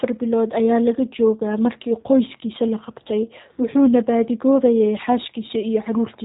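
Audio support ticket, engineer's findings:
G.729 codec damage, throughout. Speech band-limited, nothing above 4 kHz; rough, buzzy, synthetic texture, plainly audible. Probable component: VoIP leg, consistent with G.729A at 8 kbit/s. Mechanism: speech reduced to a vocal-tract filter, pitch predictor and a handful of pulses per 5 ms half-frame, then resynthesised, so fine waveform detail and upper harmonics are lost. Check codec negotiation; prefer wideband codec if available.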